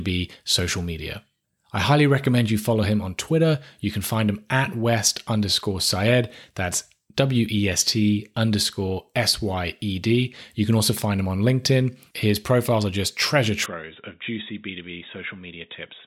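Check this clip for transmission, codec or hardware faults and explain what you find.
One fault is present. Input switched to a poorer device, from 13.66 s to 16.07 s, just after "just treasure": the recording likely jumps to another microphone, which passes nothing above 3.8 kHz, so the speech turns dull and boxy with no gap, drops by roughly 10 dB, and gains a faint new noise floor.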